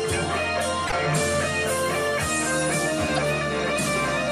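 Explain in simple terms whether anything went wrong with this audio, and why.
Two brief glitches break into the sound, at 0.87 to 0.94 s and 3.15 to 3.18 s. Each is a corrupt frame decoded. A few small chunks of compressed data had damaged bits. The player used them anyway, putting sound at wrong pitches.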